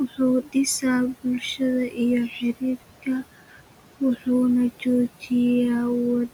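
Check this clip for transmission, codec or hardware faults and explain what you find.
Two faults come from noise suppression acting on speech recorded over room noise that sits about 14 dB below the voice.

Noise suppressor artifacts run through the whole clip. The suppressor pulls down bands it judges to be steady noise, frame by frame, by about 18 dB. The background sinks in pauses and swells back under speech.

Speech cut by the noise suppressor occurs at 0.08–0.2 s, 0.43–0.56 s, 1.14–1.61 s, 1.89–1.99 s and 3.48–3.61 s. The suppressor mistook quiet parts of the speech for noise and turned them down with it, by about 12 to 16 dB. Each stretch loses around a tenth of a second of sound, which comes across as swallowed or faint.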